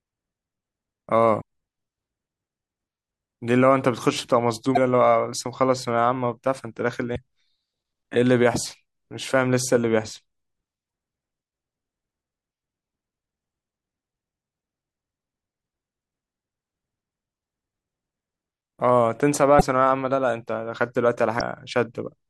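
Broken MP3 bit reservoir faults occur at 1.40 s, 4.74 to 4.78 s, 7.15 to 7.18 s, 10.88 s, 19.58 to 19.62 s and 21.38 to 21.41 s. Each is a brief glitch, at most about 45 ms, where the speech skips ahead with a short chirp, burst of noise or brief hole. The likely cause is lost MP3 frames, each spanning about 26 ms. The frame after each gap reaches back into the bit reservoir for borrowed data and decodes bytes from the wrong frame.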